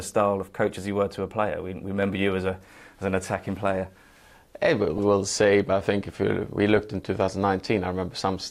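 DAB burbling appears at 4.98 s and again from 6.69 to 6.79 s. Bit errors, around a tenth of a percent, slip past error correction into the MP2 data, so individual sub-bands get short noise blips or jump in level for up to a frame, giving brief glitches over the sound.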